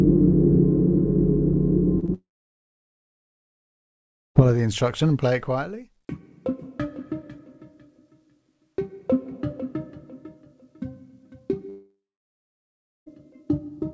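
Right around 2.00 s and again at 2.06 s you get two quick bits of short concealed packet loss, each about 20 ms of audio that didn't arrive in time. The receiver patched each gap by stretching the preceding sound, so they come across as tiny smears or wobbles. Then come two long stretches of dead air, from 2.14 to 4.37 s and from 11.69 to 13.08 s. Each starts with a brief fading buzz or hiss and then goes silent, for about 2.1 s the first time and about 1.06 s the second, before the audio picks up further along with that chunk simply gone. That pattern points to a likely long network dropout in each case. The whole thing runs over a call path with nothing above 8 kHz, which fits a G.722 codec at 64 kbps.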